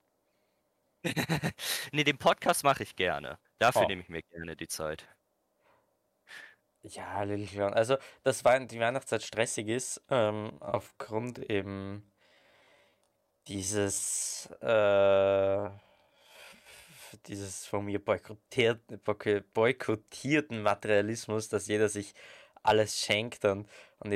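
From 10.49 to 16.85 s, after "stressig ist ähm", the speech slows to about 0.62 times its pace while pitch holds. The speech drags. This is a time-stretched section, likely software repeating short pieces to fill length. Normal pace returns at "dieses von mir boykottierten".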